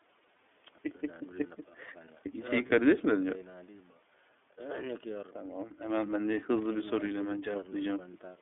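Throughout, the iLBC codec limits the speech to about 250 Hz to 3.5 kHz and leaves it rough and synthetic, consistent with 30 ms frames at 13.33 kbps. At 0.36 s and 2.66 s, lost iLBC frames leave 30 ms gaps concealed by a buzzy repeated pitch cycle. Unlike a dropout, the gap isn't silent, and the speech recovers almost at once.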